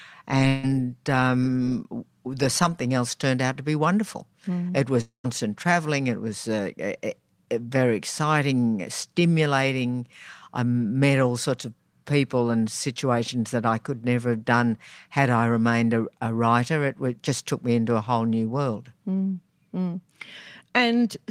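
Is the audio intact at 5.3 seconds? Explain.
No. At 5.3 s the audio is just resuming, with "traveling it was uh", after a long network dropout from 5.01 to 5.26 s. About 240 ms of signal never arrived, likely lost in transit. The receiver stretched the last sound into a fading buzz or hiss, then near-silence, so that stretch is absent.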